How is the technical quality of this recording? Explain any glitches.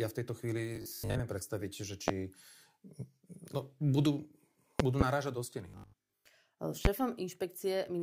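The recording has two kinds of glitch: stretches of robotic sound and several loud pops.

Robotic sound from repeated short buffers appears from 0.76 to 1.20 s, right after "v tejto" and before "predstaviť že", and again from 5.70 to 6.26 s after "do steny". The speech turns into a rigid, metallic 50 Hz buzz. The likely cause is audio arriving too slowly, so most of each stretch is a 20 ms chunk played over and over.

Loud pops come at 2.08 s, just after "predstaviť že", as a double pop between 4.80 and 5.04 s, and at 6.85 s. Each is a sharp crack that stands far above the speech, which continues underneath. These are likely sudden voltage spikes in the signal chain.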